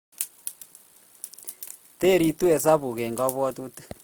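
Throughout the speech, the likely cause is Opus compression working with too few bits. The encoder seems to be in its music-oriented CELT mode at full bandwidth, which preserves each band's energy but, when short of data, fills the detail by folding lower bands or substituting noise. The result is plainly audible damage that fits a bitrate of about 24 kbps: the speech keeps its top end but sounds grainy and rough, with noisy texture where clean tone should be.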